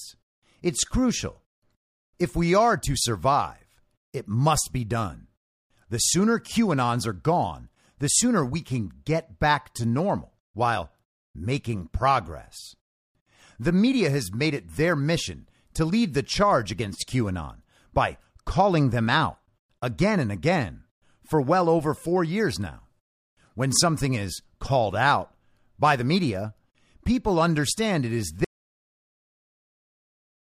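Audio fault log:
28.44–30.53 s, audio dropout to silence: the input signal was likely lost, through a disconnected device, a failed link or a mute, while recording carried on writing silence. The speech cuts off mid-flow and the final 2.1 s are dead silent, with no room tone.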